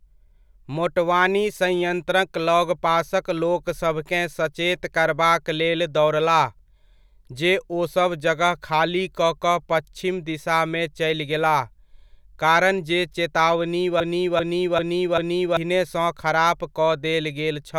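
At 14.00 s the speech locks into a broken-record loop: a fragment of about 392 ms plays four times back to back until 15.57 s, then normal audio resumes. The likely cause is a stall in the player, encoder or stream that kept resending the last buffered piece, so the speech due in that stretch never arrives. On a waveform and spectrogram, four identical blocks sit side by side, each edge marked by an abrupt seam.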